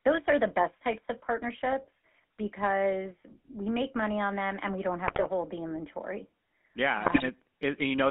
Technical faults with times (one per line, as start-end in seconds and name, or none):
0.00-8.11 GSM full-rate codec
5.07-5.27 GSM bit errors
7.04-7.23 GSM bit errors